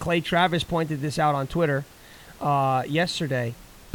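Nothing in this speech recording points to a technical fault, and the faint room noise sitting about 26 dB below the talker is simply part of the space the microphone was in.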